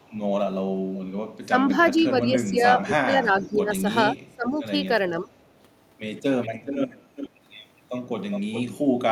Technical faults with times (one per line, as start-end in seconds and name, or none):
0.02-0.18 echo leak
1.43-5.30 speech suppressed in double talk
1.81-2.04 echo leak
3.39-3.54 echo leak
6.42-7.29 echo leak
7.94-9.11 echo leak